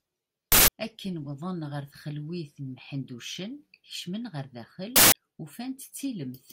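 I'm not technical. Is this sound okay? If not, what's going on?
No. An uninitialised buffer fault hits at 0.52 to 0.68 s and 4.96 to 5.12 s: the playback grabbed a 160 ms block of leftover memory before the speech was written in, giving brief harsh bursts of noise.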